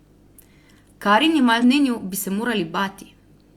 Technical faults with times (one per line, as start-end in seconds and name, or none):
1.58-1.64 damaged data in a compressed stream